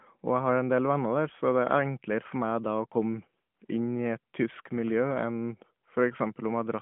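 Speech, with no technical faults found.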